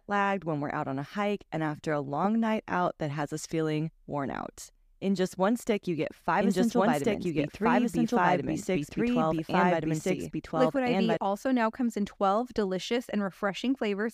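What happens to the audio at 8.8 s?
A second, likely slower capture path mixes the speech in again, creating a doubled audio track from 6.41 to 11.17 s. At 8.8 s a dry, full-band copy at roughly equal loudness trails about one and a half seconds behind the original.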